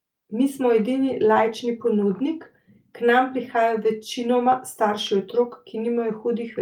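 Nothing goes wrong in this recording at any point, so there's no fault to walk through here.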